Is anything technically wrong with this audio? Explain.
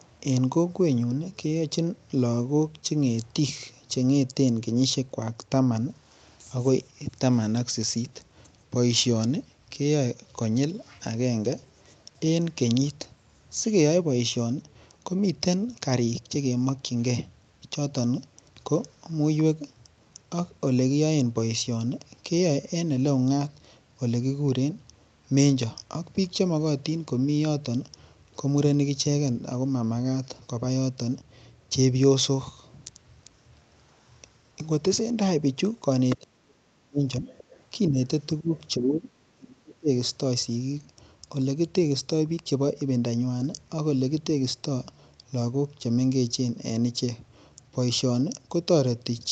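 Yes. Between about 36.1 and 39.9 s the speech shows echo-canceller trouble, most likely from both sides talking at once.

Other side's voice leaking through: brief scraps of a second voice appear at 36.09–36.16 s (fairly strong, about 10 dB below the speech), 37.27–37.63 s (about 25 dB down) and 38.56–38.64 s (about 30 dB down). The far end's loudspeaker sound likely wasn't fully cancelled from the microphone. Unlike a dropout, this adds a separate voice rather than removing anything.

Speech suppressed in double talk: the main voice is pushed down at 36.17–37.28 s (deep, up to about 40 dB), 37.89–37.98 s (a slight dip of about 10 dB) and 38.4–39.89 s (up to about 30 dB). Unable to separate talker from echo, the canceller likely turned everything down.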